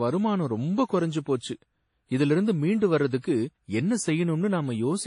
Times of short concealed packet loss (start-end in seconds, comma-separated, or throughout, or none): none